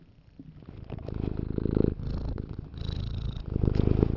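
An everyday sound recording with aliasing throughout: content above 6 kHz folds back as gritty, unrelated tones, roughly 30 dB down, which fits a 48 kHz to 12 kHz downsample without filtering.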